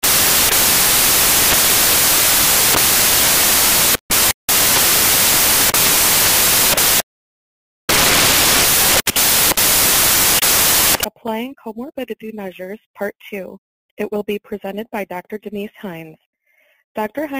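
Samples built from the wrong bytes fill the audio from 0.0 to 11.04 s. Over that stretch the reader assembles each sample from its bytes incorrectly, whether shifted by one byte, in swapped order or on a misread alignment. The rapidly varying low-order bits end up carrying the weight of each value. The result is loud, harsh broadband noise, close to white on the louder sounds.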